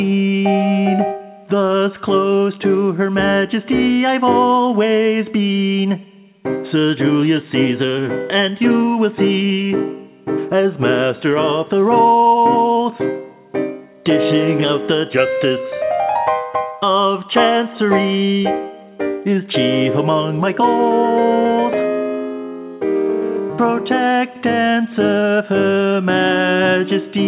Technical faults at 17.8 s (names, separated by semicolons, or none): none